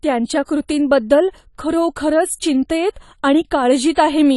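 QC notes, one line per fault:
Throughout: AAC compression. The speech has nothing above 11.5 kHz and plainly audible coding damage, sounding dull and smeared. This is likely low-bitrate AAC-LC, where the encoder drops the top band and quantises coarsely to fit a rate around 32 kbps.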